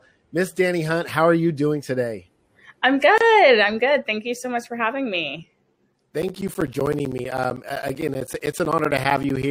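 A speech clip with two distinct faults. The first is a gap at a join of encoded pieces, from 3.18 to 3.21 s. It falls right after "you doing today I'm" and before "I'm good". A silence of about 28 ms cuts into the running speech, with smeared edges. The speech then resumes where it stopped. Two separately encoded sections were spliced without trimming the encoder's leading delay and last-frame padding. The second fault is periodic USB or driver dropouts, running from 6.22 to 9.43 s. Every 64 ms, around ten milliseconds of audio vanishes and is replaced by silence, roughly fifty times in all. The result is a steady ticking, about sixteen per second, heard only where there is signal. Something in the background stalls the USB bus or audio driver on a fixed cycle, so samples are lost each time.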